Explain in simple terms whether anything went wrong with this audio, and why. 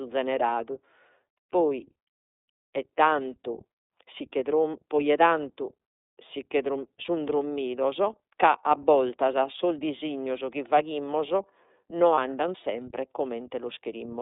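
The whole recording went through the iLBC codec, a phone-style voice compressor. It keeps only sound between roughly 250 Hz and 3.7 kHz, so the speech sounds narrow and muffled. It also squeezes each 30 ms slice hard, which makes the voice plainly rough and slightly synthetic.

Lost iLBC frames cause a brief glitch from 12.15 to 12.18 s. That 30 ms gap fits one missing slice. The decoder filled it by repeating the last bit of voice with some noise. You hear a tiny held, buzzy sound, then normal speech returns immediately.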